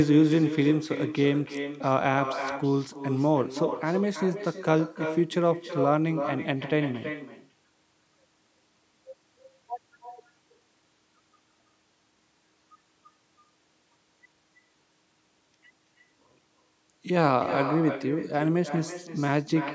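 From start to finish the speech carries an echo with no canceller: the far end's loudspeaker is feeding the talker's voice back into its microphone, and nothing strips it out. Each phrase returns about a third of a second later, roughly 9 dB quieter and thinner. On a waveform every burst has a smaller trailing copy; a spectrogram shows each syllable's pattern faintly repeated just to its right, all within the call band that stops at 8 kHz.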